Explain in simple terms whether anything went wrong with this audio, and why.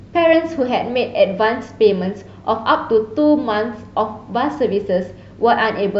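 Nothing went wrong; no faults can be heard here.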